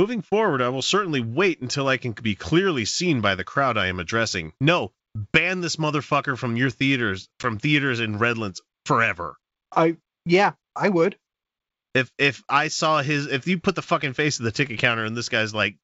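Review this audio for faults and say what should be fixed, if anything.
A short hard-edged hole at 7.43–7.48 s, just after "motherfucker from your theaters", with the sound returning briefly rough before settling. This is packet loss on an ADPCM call: about 10 ms, roughly one packet, went missing, and the G.722 decoder's predictor and step size drifted from the sender's until they resynchronised. Fix it with packet loss concealment or redundant packets on the call path.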